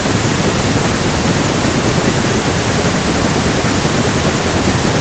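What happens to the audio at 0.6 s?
Nothing goes wrong at 0.6 s: the speech passes through intact, carried by the call's normal microphone processing and codec path, with its usual band limit at about 8 kHz and no dropout, glitch or distortion at that moment.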